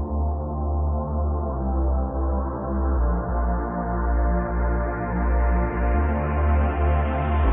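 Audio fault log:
3.29 s, damaged data in a compressed stream: a brief blip where corrupted bytes in the encoded stream caused the decoder to misread a frame, lose sync and resume at the next valid frame header, producing a short glitch in the audio.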